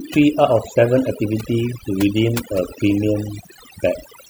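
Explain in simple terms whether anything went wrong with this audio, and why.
Overdone noise removal was applied throughout: a noise filter set too strong cut out quiet parts of the speech, with twinkling specks in the lowered background.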